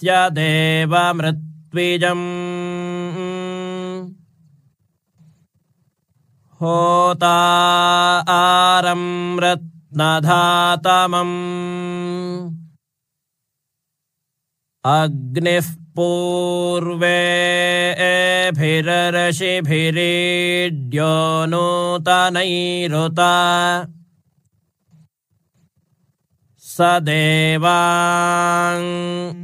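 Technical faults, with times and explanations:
Nothing technical stands out anywhere in this one, so there's no fault to list.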